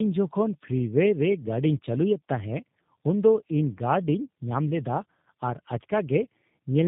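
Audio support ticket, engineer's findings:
Tandem speech coding throughout: rough, muffled, warbly speech. Spectrogram shows a hard ceiling near 3.8 kHz and smeared, wobbling harmonics. Sound points to two low-rate speech codecs in sequence, each re-encoding the previous codec's already degraded output.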